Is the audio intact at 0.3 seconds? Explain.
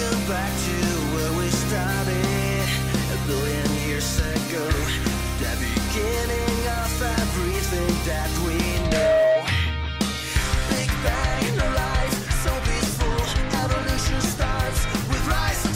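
Yes, at 0.3 seconds the audio is intact, with nothing there to break up or colour the sound.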